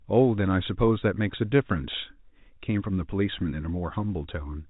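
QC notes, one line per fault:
1.00–1.02 s, packet loss with pitch repetition: about 20 ms missing, consistent with one lost packet. The last pitch period is repeated, giving a brief held, buzzy sound.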